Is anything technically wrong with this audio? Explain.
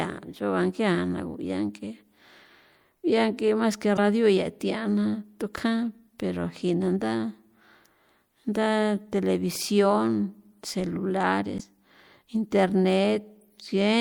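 Yes. Two short bursts of damaged data in the compressed stream occur at 3.95 to 3.99 s, just before "ia thiana tukjan pero", and at 11.56 to 11.61 s. Corrupted bytes cause the decoder to misread frames and lose sync, producing brief glitches.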